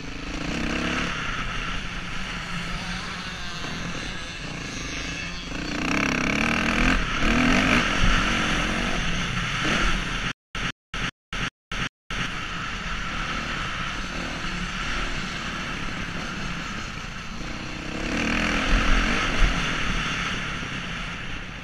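From 10.32 to 12.26 s, stutter with silent gaps: a 156 ms burst repeats five times, every 389 ms, with 233 ms of silence between. A stalled stream is the likely cause.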